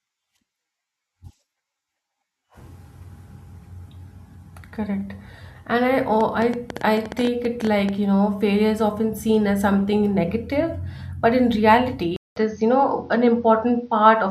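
From 6.21 to 7.90 s, a pulse source, likely electrical interference or a faulty connection or power supply, injects a train of clicks: about 10.1 per second at an uneven pace, some twenty in all, popping out roughly 10 dB above the speech and ticking through its gaps.

At 12.16 s the input is likely switched to a poorer device, after a 200 ms silence. From there to the end, nothing above 6.5 kHz gets through, so the speech turns dull and boxy at much the same loudness, over a faint new hiss far beneath it.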